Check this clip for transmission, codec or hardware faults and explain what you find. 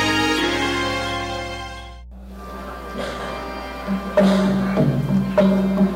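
One hardware fault is present. Mains hum runs through the whole clip. A ground loop or nearby transformer leaks the 60 Hz power line in, giving a steady low tone roughly 20 dB below the signal.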